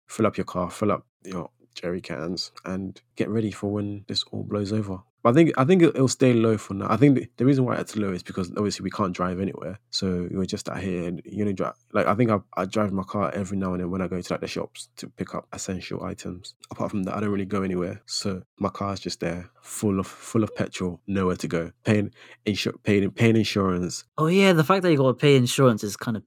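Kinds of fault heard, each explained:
No faults detected in the speech; nothing to flag.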